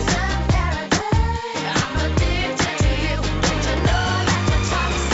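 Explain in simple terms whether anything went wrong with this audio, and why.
Nothing went wrong with this audio; it came through an ordinary call connection, which leaves out the very highest sounds, the way calls normally do.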